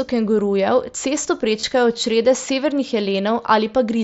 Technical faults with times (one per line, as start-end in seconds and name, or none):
1.60-1.63 concealed Bluetooth headset packet loss